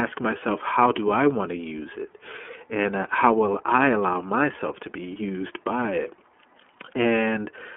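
Throughout, the speech sounds thin, slightly rough and synthetic, confined to about 250 Hz to 3.4 kHz: the iLBC codec, coding each frame independently, fitting its 30 ms, 13.33 kbps mode.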